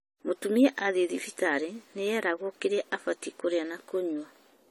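From start to finish the speech has a swirling, hollow, smeared quality, with consonant attacks blurred and soft. This points to generation loss, likely from the audio passing through a lossy AAC-LC codec around seven times at something like 64 kbit/s. Each re-encode quantised the signal again on a shifted frame grid, so the errors stacked. A spectrogram would show flickering holes and patchy energy up to 20 kHz, and the waveform's transients look rounded.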